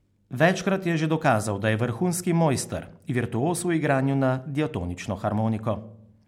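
No technical faults are audible anywhere in the speech.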